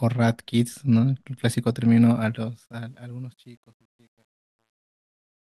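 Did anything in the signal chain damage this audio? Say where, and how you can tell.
Yes. The gain stage applying the fade-out kept too few bits and added no dither, consistent with a 10-bit path, causing truncation distortion on a fade. From 2.17 s the speech turns gritty. From 3.07 s to 5.42 s it collapses into coarse steps.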